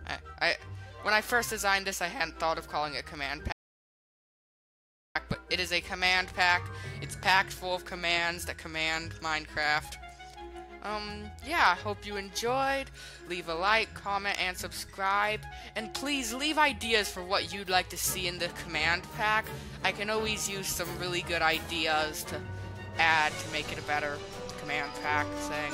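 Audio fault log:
3.52 to 5.15 s, audio dropout to silence: the sound cuts out mid-flow into a 1.63 s gap with no room tone, then comes back mid-flow. The input was likely lost through a disconnected device, failed link or stray mute while silence kept being written.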